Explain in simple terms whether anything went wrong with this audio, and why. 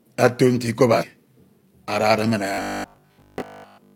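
At 0.98 to 1.04 s, compressed frames skipped: the speech jumps ahead roughly a fifth of a second, consistent with about five 46.4 ms frames.

From 2.54 to 3.94 s the speech becomes a rigid, metallic 50 Hz buzz, robotic sound most likely from repeated short buffers: 20 ms chunks replayed while most new audio is lost.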